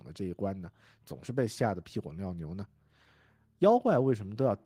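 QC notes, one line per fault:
Nothing to flag here, this speech clip came through without a single problem worth a note.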